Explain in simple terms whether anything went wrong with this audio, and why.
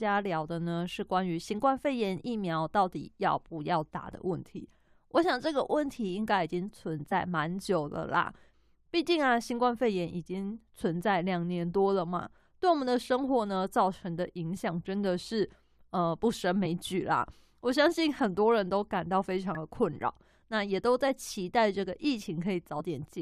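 Damaged data in a compressed stream made the decoder lose its place, producing brief chirps or blips in the speech at 7.11, 12.38, 16.65, 19.55 and 22.8 seconds.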